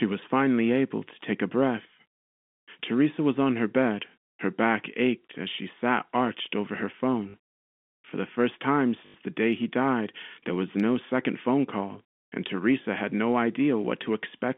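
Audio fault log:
7.30 to 9.14 s: packet loss with last packet repeated. At 7.30 s about 40 ms is lost, and at 9.06 s about 80 ms. The last packet replays to fill each gap. Repeats buzz near 50 Hz, which fits 20 ms packets.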